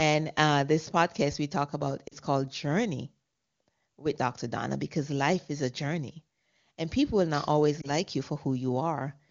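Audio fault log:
2.07–2.14 s, lost AMR speech frames: right after "podcast we talk about" there's a quick smeared dip. About 40 ms of audio, which fits two 20 ms frames, failed, so the decoder repeated the last good pitch and vocal tract settings at falling gain.
7.81–7.90 s, lost AMR speech frames: just after "people will not always" there's a shorter warble. That fits one missing 20 ms frame, patched over the same way before the voice comes back, weak or rough for a moment.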